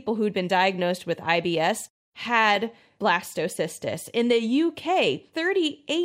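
Nothing wrong turns up in this short bit of speech; there's no technical fault to point to anywhere in it.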